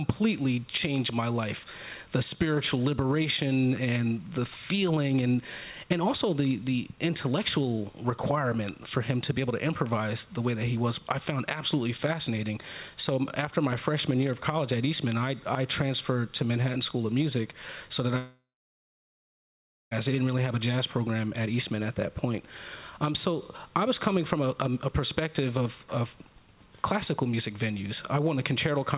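From 18.18 s to 19.93 s the audio stops coming through for about 1.75 s. For the first few tenths of a second the last sound carries on as a buzzy, fading smear, then about 1.45 s of silence follows before the sound resumes with that stretch missing. This is likely a long network dropout. On a waveform it shows as a decaying tail dropping to a flat line. The spectrogram shows a blurred, fading band, then an empty gap, all under the 4 kHz ceiling of the G.711 call path.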